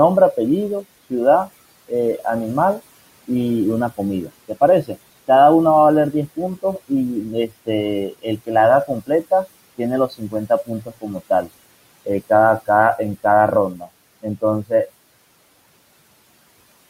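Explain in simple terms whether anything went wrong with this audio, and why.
Parts of the speech sound swallowed or go faint between 0.33 and 3.3 s, 3.97 and 5.29 s, 6.13 and 11.49 s (the worst, about a second in total), and 12.66 and 14.88 s. This is speech cut by the noise suppressor, which mistook quieter bits of the speech for the faint room noise underneath and turned them down too.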